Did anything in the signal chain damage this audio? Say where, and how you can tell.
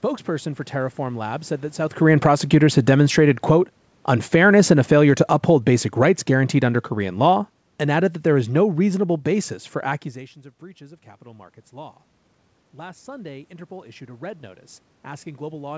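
Yes. From 1.91 s, just after "said that", the speech and the room noise sink together by about 16 dB until 10.13 s, before "of breaches of capital". That is automatic gain falling in the call processing: the AGC judged the input too loud and eased its gain down.

From 12.78 s to the end, the speech and the background swell together. This is automatic gain rising, again in the call processing. The input level dropped by about 19 dB, so the AGC gradually raised its gain to compensate, lifting the noise floor along with the speech.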